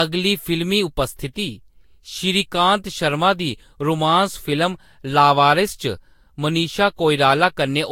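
Generation loss runs throughout the speech, likely from about three re-encodes with a Vorbis-like codec near 60 kbit/s, leaving swirly, hollow sound, blurred attacks, nothing above 16.6 kHz.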